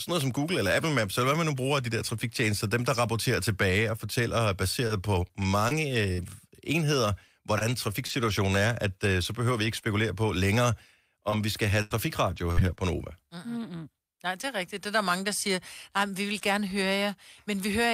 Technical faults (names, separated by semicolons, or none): scattered short gaps; repeated packet loss (robotic sound)